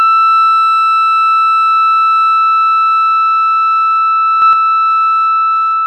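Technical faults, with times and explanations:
Throughout: computer activity noise, a faint buzz pulsing around 300 times a second, well below the music, that tracks computer load rather than the music.
4.42–4.53 s: sudden gain jump, music and background noise rising together by about 4 dB at once, likely an unramped digital gain change, not a performed swell.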